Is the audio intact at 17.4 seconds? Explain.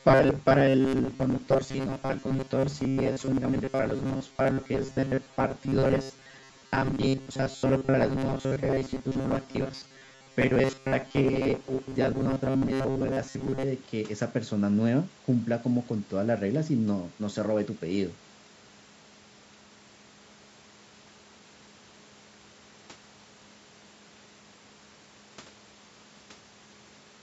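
Yes, the speech at 17.4 seconds is intact, carrying only the ordinary high-pass of call microphone processing, which takes out the lowest bass.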